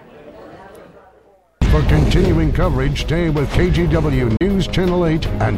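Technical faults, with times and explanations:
4.37–4.41 s, Bluetooth dropout: the sound cuts to silence for about 37 ms, then resumes already further along, as if it had kept playing through the gap rather than pausing. This is likely a wireless link where audio packets arrived at the headphones too late to be used and were discarded, leaving the output empty until fresh packets came in. The length of the hole fits roughly two lost packets.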